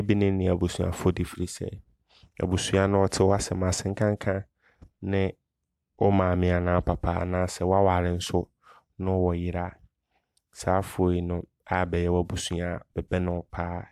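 No technical faults can be heard anywhere in the speech. Nothing in the recording or playback chain stands out at any point.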